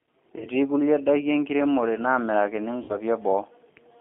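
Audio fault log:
Throughout: G.729 codec. The speech is confined to roughly 250 Hz to 3.6 kHz, so it sounds thin and muffled. The decoder rebuilds each frame from a filter, a pitch guess and a few pulses at 8 kbit/s. That leaves a plainly audible rough, synthetic edge.
0.38–0.47 s and 2.83–2.97 s: VoIP packet loss concealed by the speech codec. About 30 ms and then 60 ms of audio go missing, which fits one and then two lost packets. The decoder fills each gap by repeating its last pitch and filter at falling gain, producing a buzzy, fading smear. Because each frame builds on the last, the sound stays weak and distorted briefly after the gap.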